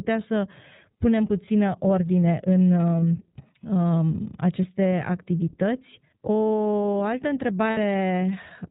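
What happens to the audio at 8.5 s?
At 8.5 s the speech sounds thin, muffled and slightly rough and synthetic, with nothing above 4 kHz, as it does throughout the clip. This is iLBC codec damage: each 30 ms frame is coded on its own, which fits the 13.33 kbps mode.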